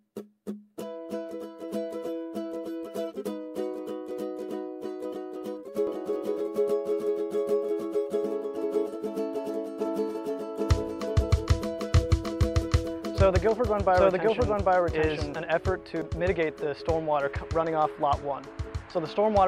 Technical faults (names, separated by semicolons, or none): doubled audio track